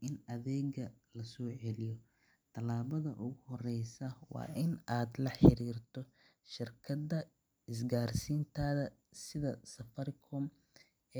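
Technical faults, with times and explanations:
No technical faults can be heard in this recording.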